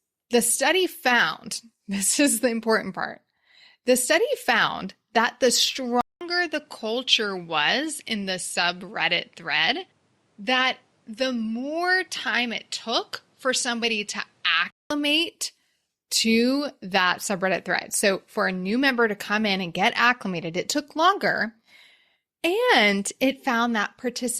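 An input switched to a poorer device from 6.01 s to 14.9 s. A 200 ms silence marks the switch, after which the speech turns duller, with nothing above 11.6 kHz, and a faint new background noise appears well below the speech while the overall level stays about the same. The likely cause is the recording moving to a different, narrower-band microphone or headset input, which shapes tone and noise differently. The fuller sound returns at 14.9 s.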